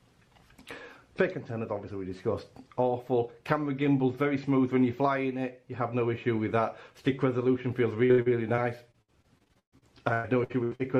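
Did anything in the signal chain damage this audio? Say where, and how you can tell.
Yes, in the network stage. Repeated packet loss from 8.05 to 10.81 s gives choppy, robotic sound. Gaps up to 130 ms are patched by extending preceding sound.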